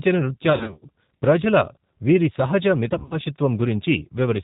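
The whole speech clip carries G.729 codec damage, plainly audible. The band stops at 4 kHz, and the voice sounds rough and slightly synthetic. This fits an 8 kbit/s codec that rebuilds speech from a vocal tract filter, a pitch predictor and a few pulses per frame.

From 0.50 to 0.88 s there is VoIP packet loss concealed by the speech codec. Gaps scattered over about 320 ms point to roughly 190 ms of missing audio, the longest near 50 ms. The decoder stretches its last sound into a buzzy tone or coloured noise that fades.

After "వీరి సహజ", from 2.94 to 3.19 s, the same concealment returns. Losses spread over about 200 ms suggest roughly 120 ms missing, the longest near 40 ms. The voice stays weak or distorted and recovers only gradually.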